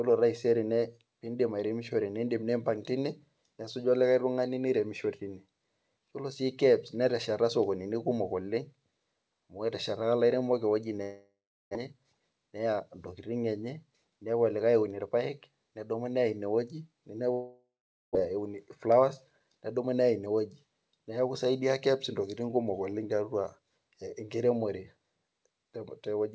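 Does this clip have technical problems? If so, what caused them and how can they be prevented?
Yes. A long network dropout at 11.02–11.77 s and 17.33–18.17 s stretches the last sound into a fading buzz, then silence, and about 0.6 s never returns, likely from packets lost in transit. Prevention: use a steadier connection with forward error correction.

Jitter buffer speed-up at 11.87–12.81 s (110%) and 18.30–20.27 s (109%) trims pitch periods to shed the delay that built up, roughly a tenth and then a fifth of a second, so the sound briefly hurries at unchanged pitch. Prevention: reduce network jitter so delayed packets don't arrive in bursts.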